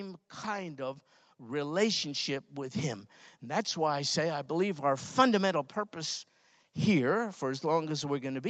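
A speech recording made through call microphone processing, which keeps nothing above about 8 kHz. The fault is automatic gain rising: from 0.42 s to 2.85 s the level climbs steadily by about 9 dB. The gain control decided the input was too quiet and turned itself up gradually, so the voice and the background swell together over those couple of seconds rather than jumping at once.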